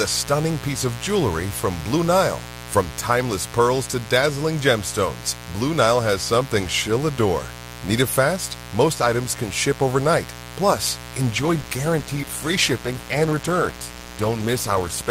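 A raspy mains buzz sits under the speech from start to finish. It is steady and harsh, not a smooth hum. Sharp switching spikes, likely from a dimmer, a rectifier or a missing shield, leak in twice per cycle of a 60 Hz supply. That spiky shape spreads harmonics of 60 Hz up into the kilohertz range. The buzz is fairly loud, roughly 15 dB below the speech. It never lets up.

At 11.30 s the quality drops suddenly, with no gap. This is an adaptive stream switching to a lower bitrate. A slowed connection pushed the player onto a leaner version of the stream. Codec artefacts grow. The change fits a step from around 64 kbit/s Opus down to about 16 kbit/s. The degraded sound lasts to the end, at 15.10 s.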